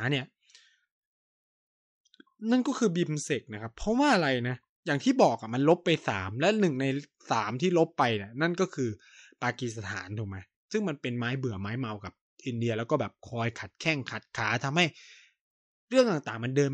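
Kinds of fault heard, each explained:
Nothing wrong turns up here, so there's no fault to list for this bit of speech.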